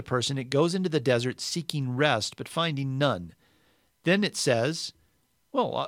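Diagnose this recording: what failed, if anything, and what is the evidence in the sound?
Nothing in the signal chain has failed: the recorded speech arrives continuous and intact, and no stage from capture through to playback leaves any audible trace of trouble.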